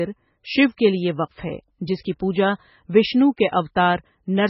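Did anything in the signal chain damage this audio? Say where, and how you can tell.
Yes. The damage sits at the codec stage and runs through the whole speech clip. Nothing survives above 5.5 kHz, and the sound is watery and swirly, with smeared attacks. This is likely heavy MP3 compression, and the damage fits a very low bitrate of around 16 kbps.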